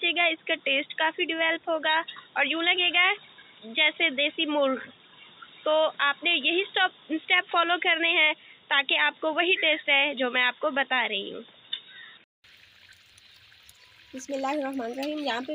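From the start until 12.44 s the audio is band-limited, with nothing above about 3.8 kHz, giving a dull, boxy tone and a background noise floor roughly 35 dB below the signal. At 12.44 s a silence of about 200 ms follows, after which the full bandwidth returns at much the same level. The pattern points to an input switched to a poorer device, most likely a headset call profile or lesser microphone, before switching back.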